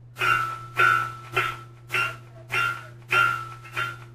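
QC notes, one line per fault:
No faults detected.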